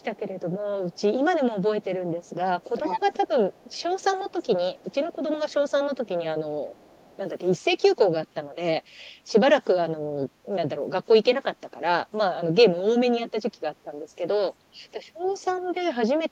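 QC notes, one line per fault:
0.00–0.41, 0.91–1.01, 2.23–2.29, 5.49–6.08 and 6.71–7.17 s, echo leak: the far end's echo canceller likely let some loudspeaker pickup through, so a faint copy of the voice, around 35 dB below it, trails 400 ms behind in brief scraps.
2.61–5.16 s, echo leak: the same failure to cancel the loudspeaker signal is much stronger here, likely from the canceller losing its hold for this stretch. The 400 ms delayed copy sits only about 10 dB under the voice.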